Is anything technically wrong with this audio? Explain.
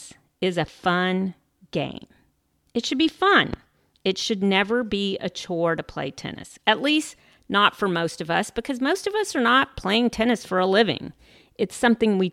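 Yes. At 3.54 to 3.56 s, just after "should be fun", there is a loud pop. A likely voltage spike lands on the signal as one sharp pop about 10 dB above the speech, which carries on underneath.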